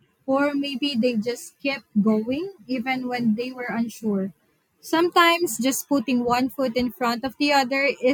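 Nothing stood out on listening to this speech recording.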